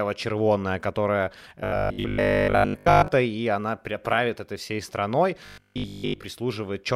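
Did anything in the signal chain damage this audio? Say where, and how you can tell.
Yes. At the driver or buffer stage, audio likely arrived too seldom, so the software kept replaying the last 20 ms block while most of the real signal was dropped. This is robotic sound from repeated short buffers, heard from 1.60 to 3.08 s and again from 5.46 to 6.26 s. The constant looping stamps a fixed 50 Hz buzz onto the speech, one over that 20 ms period, turning it into a rigid metallic drone that only loosely follows the original.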